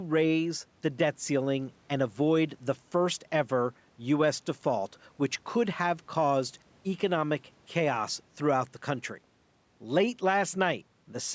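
Nothing goes wrong in this speech; it has simply passed through a call's microphone processing, so the sound stops at 8 kHz and the lowest bass is trimmed away, which is just what that path does.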